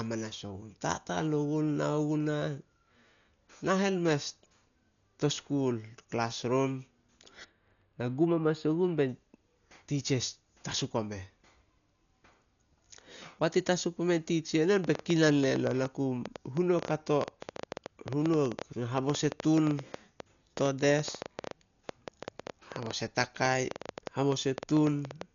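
Speech runs throughout the clip, and the whole of it sounds dull and band-limited, with a rough, fluttering grain around voiced tones. That pattern points to Dolby Digital compression at a low bitrate, likely around 48 kbps, with heavy damage. On a spectrogram the energy stops abruptly near 6.9 kHz, and below that the harmonics appear blotchy and speckled with noise where the decoder has filled in missing detail. From 7.44 to 9.09 s a channel delay causes comb filtering. One side arrives only a few samples late, roughly 0.07 ms, and when the channels are summed the shared content cancels at evenly spaced frequencies. Because the delay is so short, the first notch falls at roughly 7 kHz, right at the top of the remaining band, so the sound turns duller and phasey. A spectrogram would show a fixed dark band across that stretch. From 14.84 to 25.22 s a train of clicks ticks over the sound at about 8.6 per second, spaced irregularly, roughly a hundred in all. 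They continue through the pauses. Interference or a faulty connection is the likely source. In the waveform they appear as narrow spikes standing about 10 dB above the signal, and on a spectrogram as thin vertical lines running through every frequency.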